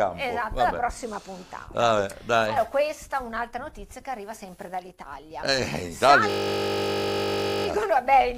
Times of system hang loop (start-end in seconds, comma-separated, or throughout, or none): 6.30-7.66